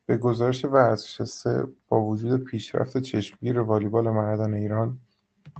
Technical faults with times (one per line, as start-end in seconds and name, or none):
none